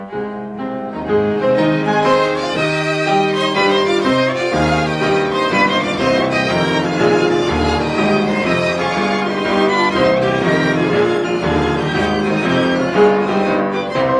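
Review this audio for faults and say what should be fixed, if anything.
No faults turned up in the review, so nothing needs to be fixed.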